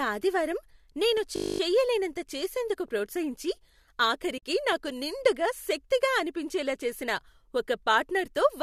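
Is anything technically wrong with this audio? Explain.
Yes, there are two faults in this speech clip.

From 1.36 to 1.6 s there is a steady 50 Hz buzz, one 20 ms slice repeating about twelve times. This is a system hang loop: playback froze while the hardware kept replaying one buffer.

From 4.38 to 4.43 s the sound fades softly out and back in. This is AAC frame loss with muting: about 50 ms of frames went missing, and the decoder zeroed them. The short frames fit the likely low-delay AAC coding.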